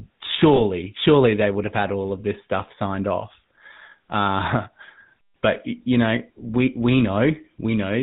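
GSM full-rate codec damage runs through the whole recording. The speech has the gravelly, buzzy texture of a codec that rebuilds the voice from a vocal-tract model excited by regularly spaced pulses, discarding two of every three excitation samples. Everything above 4 kHz is gone, so the voice sounds boxed-in and dull. The roughness is plainly audible and fits the 13 kbit/s full-rate GSM coder.

Lost GSM frames occur from 0.56 to 0.60 s, just before "surely they would have". About 20 ms of signal went missing, which fits a single dropped frame. The decoder filled the gap by reusing the parameters of the last good frame, so instead of a clean dropout there is a brief, rough metallic ring. The loss is short enough that the sound never fades to silence before normal decoding resumes.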